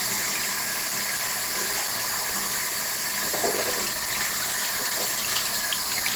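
From start to finish, the audio carries plainly audible damage from lossy coding. It is likely Opus compression at a very low bitrate, around 16 kbps. At that rate the encoder runs in hybrid mode. A speech-style coder handles the low band, while band energies alone carry the top. The result sounds hoarse and somewhat muffled. Tones lose their clean edges and turn rough and grainy. The bandwidth stays wide, reaching about 20.1 kHz.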